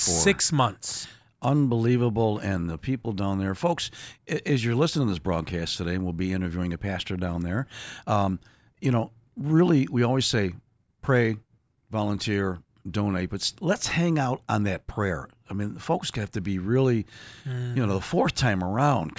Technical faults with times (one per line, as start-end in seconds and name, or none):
none